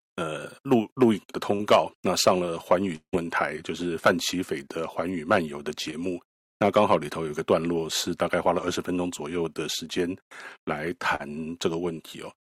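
At 1.55 to 1.61 s, a short concealed packet loss replaces about 40 ms of speech with a synthetic continuation of the preceding sound. It is heard as a brief smear or wobble. On a spectrogram, the preceding sound is held steady for that span before it blends back into the real signal.

From 2.95 to 3.15 s, the speech suddenly turns into a fading buzz or hiss lasting about 171 ms, which ends in roughly 80 ms of near-silence before the speech resumes with about 180 ms missing. This is a long network dropout, likely caused by a run of packets arriving too late or not at all. On a spectrogram, the continued sound smears and then fades into a blank gap. The waveform's envelope decays and then goes flat.

Two more short concealed packet losses follow. At 5.91 to 6.02 s, about 20 ms is filled, and the timing stretches by about 10 ms. At 11.15 to 11.21 s, another 40 ms fill gives the same brief smear heard earlier.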